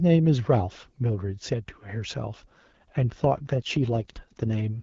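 Up to about 2.13 s the speech comes through clean, with light AMR-WB (HD Voice) coding at a quality that fits its 12.65 kbit/s mode. From 2.13 s to 4.82 s there's an AMR rate drop. The link likely weakened, so the codec stepped down and spent bits on error protection. The voice turns rougher and more synthetic, which fits 8.85 kbit/s. The bandwidth stays the same and nothing drops out.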